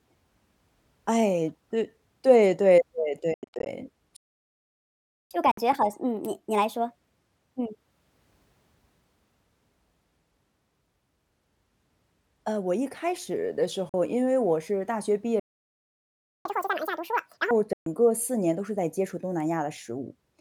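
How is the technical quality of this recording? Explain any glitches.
The speech in this recording is repeatedly interrupted by short dropouts, two longer stalls and two sped-up recovery passages.

Bluetooth dropouts occur at 3.34 to 3.66 s, 5.51 to 5.58 s, 13.89 to 13.94 s and 17.73 to 17.86 s. These holes are likely caused by wireless packets arriving too late at the headphones. The first is a cluster of gaps, about 218 ms lost over 319 ms, the longest run 87 ms. Unlike a stall, the speech resumes further along, as if it had kept playing.

Playback stalls run from 4.16 to 5.31 s (1.14 s) and from 15.40 to 16.45 s (1.05 s). Each is likely the player running out of data. The speech halts for over a second and then resumes.

Catch-up at higher speed follows each stall. From 5.31 to 8.31 s the speech plays at 1.25 times speed, pitch raised about four semitones. From 16.45 to 17.51 s it plays at double speed, pitch up nearly an octave. 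The speed and pitch rise together, and the brief chipmunk quality right after a silence marks this as backlog recovery.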